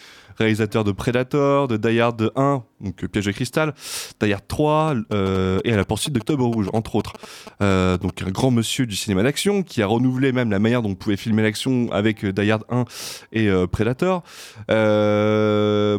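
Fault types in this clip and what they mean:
GSM signalling bursts: a nearby 2G phone sending short groups of control bursts, rectified by the audio circuitry into a galloping dit-dit-dit of brief 217 Hz buzzes. It runs from 4.81 to 8.18 s, ending just before "un grand monsieur du", well below the speech level.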